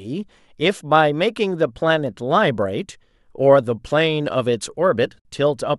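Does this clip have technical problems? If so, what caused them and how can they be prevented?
Yes. A gap at a join of encoded pieces silences the speech from 5.20 to 5.25 s, about 54 ms, where separately encoded segments kept their encoder delay and padding. Unlike a dropout, nothing is lost, and the speech resumes exactly where it stopped. Trim each segment's encoder delay and padding before joining, or encode the material as one continuous stream.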